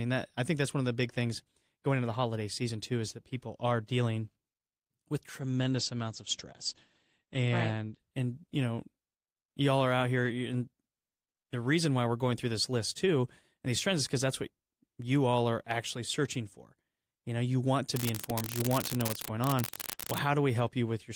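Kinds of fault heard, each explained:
Call bitrate drop: from 5.42 s to 8.93 s the speech turns coarse and muffled. The call's encoder was given far fewer bits, in a way that fits a fall from about 32 kbps to 14 kbps, and it held its lowest rate for about 2.4 s. At that rate the coded bandwidth shrinks from 20 kHz to 8 kHz, so the top end disappears and the remaining detail sounds rough and watery.
Unreliable data bit: from 17.93 s to 20.18 s a steady crackling fizz sits on the audio. One line of the digital data path is marginal, so its bit flips at random in some samples. Each wrong bit adds a spike of the same fixed size, whatever the speech is doing, and the scattered spikes merge into a constant gritty crackle.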